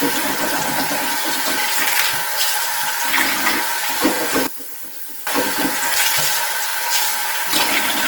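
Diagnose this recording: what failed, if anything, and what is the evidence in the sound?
Codec stage: the whole clip sounds grainy and rough, with tonal parts turned noisy while full bandwidth is kept. That texture is likely Opus compression in its CELT music mode at a low rate, which fits about 16 kbps, with bands filled by noise.

Buffer or chunked-processing stage: brief stutters at 1.62, 4.16 and 6.71 s, each replaying about 44 ms of sound. These are overlapping chunks. Blocks of roughly 2.5 s each start before the previous one ends, so the overlap plays twice at every join.

Playback or mono-summing stage: from 4.47 to 5.27 s the level falls by about 10 dB, leaving only the small mismatch between the channels. That is likely one channel inverted, so common material cancels when the channels are summed.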